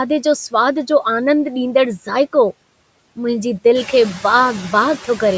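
Speech with two faults. Noise suppressor artifacts run throughout: steady background noise is pulled down by about 18 dB between phrases. From 0.10 s to the end, a soft rattle of ticks recurs roughly every 20 ms. These are likely clock slip clicks, with one sample dropped or repeated each time from a clock mismatch of around a thousand parts per million. The room noise rises by about 11 dB near 4 s.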